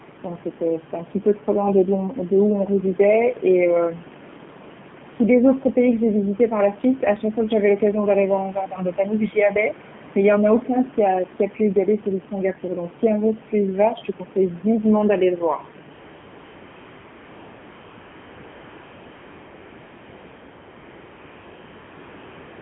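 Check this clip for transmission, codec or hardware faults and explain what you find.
Two faults are audible here. Throughout, the speech is squeezed into a 150 Hz to 3.4 kHz band with a buzzy, synthetic edge, typical of the AMR narrowband mobile codec at a low rate, which fits the 7.4 kbps mode.

From 15.94 s to the end, at 22.62 s, you get AMR comfort noise. The sender stopped transmitting speech frames, so the receiver fills the gap with a smooth, steady synthetic hiss standing in for the real room background, which otherwise sits about 20 dB below the speech.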